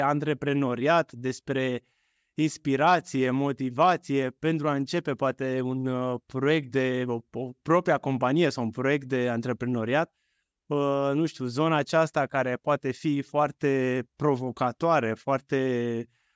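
No technical faults can be heard anywhere in the speech recording, and the signal stays steady and intact throughout.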